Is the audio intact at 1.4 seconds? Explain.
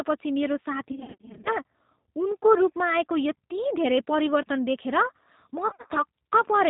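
No. At 1.4 s the audio falls inside a stretch of VoIP packet loss concealed by the speech codec, running from about 0.92 to 1.50 s. Roughly 320 ms of audio went missing in gaps scattered over 540 ms, the longest about 50 ms. The decoder filled each gap by extrapolating its last pitch and filter at falling gain, so the sound smears into a buzzy, fading tone and stays weak while the predictor recovers.

Underneath, the whole clip carries G.729 codec damage. Speech is rebuilt from a vocal tract filter, a pitch predictor and a few pulses per frame, which fits an 8 kbit/s G.729A stream. Nothing above 4 kHz passes, and the result is plainly rough and synthetic.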